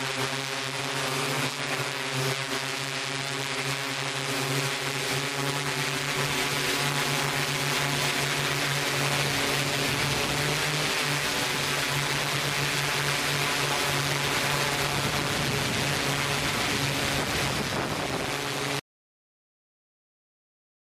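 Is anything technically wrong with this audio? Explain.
Yes. At 18.80 s the audio suffers a dropout to silence that runs to the end of the clip, about 2.0 s in total. The sound stops abruptly mid-flow and is replaced by silence, with no room tone or noise floor remaining. The likely cause is a lost input, such as a disconnected device, failed link or accidental mute, while recording continued. Unlike a natural pause or fade-out, there is no decay and no background hiss, just a hard cut into complete silence.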